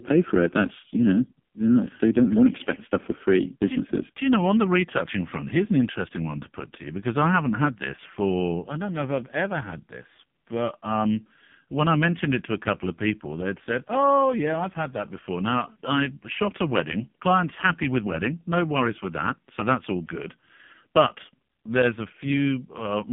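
Throughout, heavy AMR narrowband mobile codec damage: the narrowband line leaves a 150 Hz to 3.5 kHz band, and sparse-pulse coding leaves buzzy, synthetic voicing, consistent with a 5.15 kbps mode.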